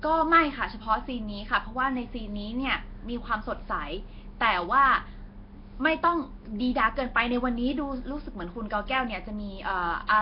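Throughout, the speech carries a rough, hissy halo and smeared, underwater texture, likely Nellymoser compression at a low bitrate; spectrograms show noise-filled bands and nothing above 5.3 kHz.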